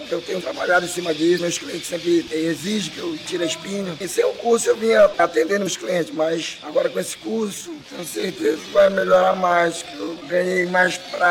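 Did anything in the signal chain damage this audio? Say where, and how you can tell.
Yes. Two brief, glitchy blips break the sound, at 1.35 to 1.39 s and at 5.63 to 5.68 s, each lasting about 44 ms. This is damaged data in a compressed stream at the codec or storage stage. Corrupted frames made the decoder misread them and lose sync before locking onto the next valid frame.

From 7.40 s to the end, the pace suddenly drops to about 0.66 times normal speed while the pitch holds steady. That points to a time-stretched section, likely from editing or playback software that lengthened the audio by repeating short slices to preserve pitch.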